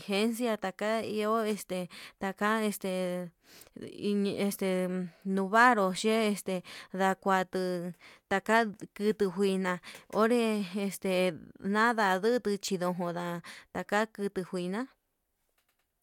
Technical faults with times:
none

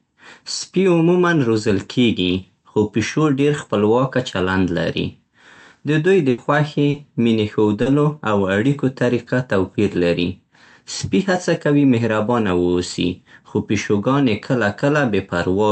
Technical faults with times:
6.30-6.41 burst of packet loss
6.90-6.97 short concealed packet loss
7.82-7.89 short concealed packet loss

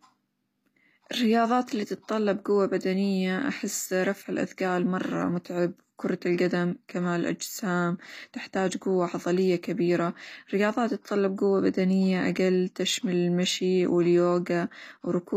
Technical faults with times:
0.00-15.37 HE-AAC compression

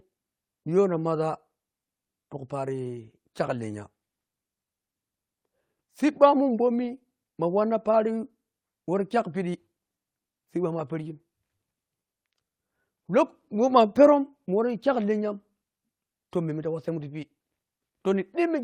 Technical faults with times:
none

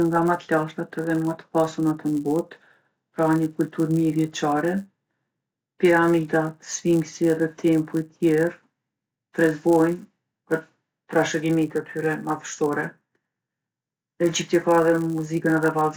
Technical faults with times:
0.00-15.96 resampler restarted on every block

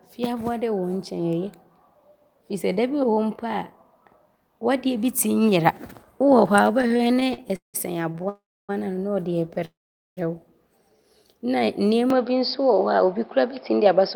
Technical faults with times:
6.79-7.76 repeated stalls (stutter)
8.12-8.25 repeated stalls (stutter)
8.29-8.71 call audio freeze
9.65-10.19 call audio freeze
10.83-11.89 jitter buffer slow-down
12.10-14.15 input switched to a poorer device
13.40-14.00 jitter buffer speed-up

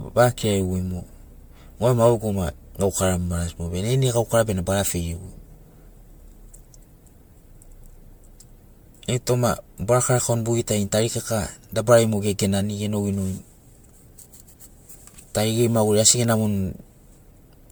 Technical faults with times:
0.00-17.72 generation loss

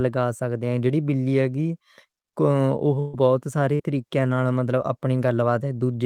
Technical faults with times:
2.99-3.15 burst of packet loss
3.75-3.81 short concealed packet loss

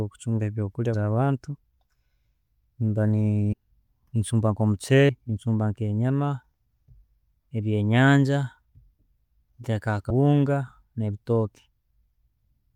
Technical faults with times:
0.93 compressed frames skipped
3.52 compressed frames skipped
5.08 compressed frames skipped
10.09 compressed frames skipped

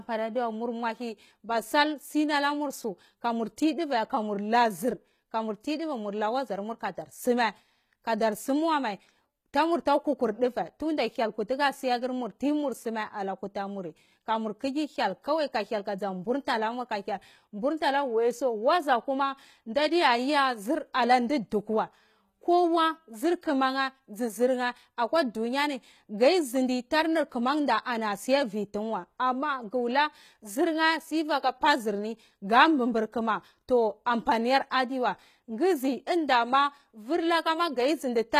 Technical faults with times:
0.00-38.40 HE-AAC compression

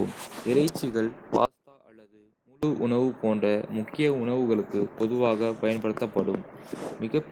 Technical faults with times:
1.45-2.63 audio dropout to a faint residue

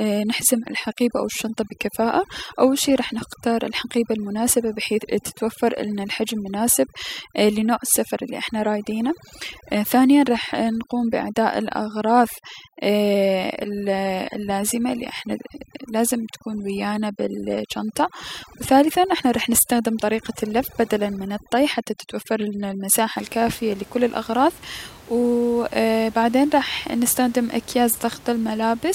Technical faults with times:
0.00-23.16 overdone noise removal

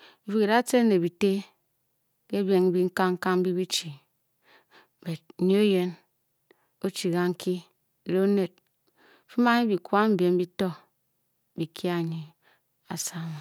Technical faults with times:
none

